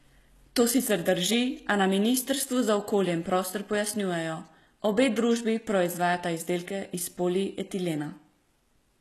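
Speech across the whole clip has gritty, metallic s sounds and a treble that sounds synthetic, with nothing above 12.3 kHz. The likely cause is HE-AAC compression at a rate that fits roughly 16 kbps, rebuilding the upper band from copied lower harmonics.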